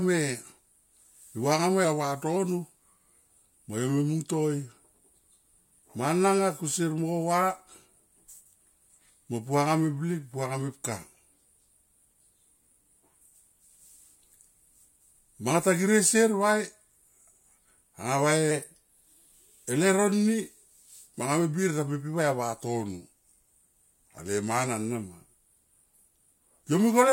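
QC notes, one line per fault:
1.85–2.36 s, 18.51–19.35 s, 22.63–24.66 s: drift correction step. Speech plays 6.3% slow, then fast, then slow, detuning roughly a semitone (−113, +106, −113 cents) before snapping back. On a spectrogram the harmonic stack steps down, up, then down as a block with abrupt edges. This is likely clock-matching software abruptly changing the playback rate to manage its buffer.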